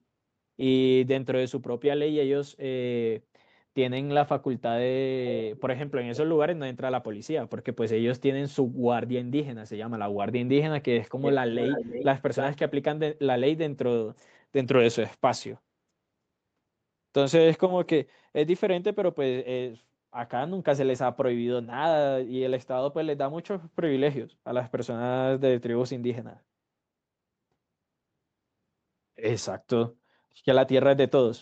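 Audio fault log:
5.57–5.62 s, 11.58–12.05 s, 12.35–12.5 s, echo leak: likely a far-end loudspeaker's echo canceller letting residue return, so a delayed copy of the speech sounds: a faint scrap lagging 408 ms, then much stronger stretches lagging 316 ms.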